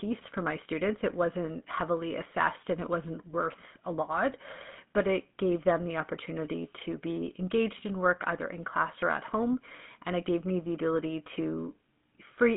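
The whole clip has gone through the GSM full-rate codec, and it's plainly audible: a buzzy, gravelly roughness from the coarse pulse excitation, which fits the old 13 kbps mobile coder. The band is squeezed to roughly 150 Hz–3.5 kHz, with nothing above 3.8 kHz.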